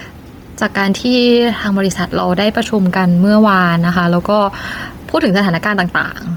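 From start to finish, the level breathes with a swing of a few decibels that leaves loud and quiet passages squashed close together. This is gain pumping, likely caused by input gain set far too high for the microphone, with a fast limiter or compressor clamping down on each loud sound and releasing as soon as it passes.

Across the same whole length, the speech carries a breathy, grainy sheen, and its upper range sounds hissy and smeared rather than crisp, even though the band itself stretches to about 20.2 kHz. The damage is heavy and points to Bluetooth LC3 compression, likely at a low setting that fits about 32 kbps with 10 ms frames. Much of the high spectrum has been discarded and replaced with shaped noise, which produces that rough, airy edge.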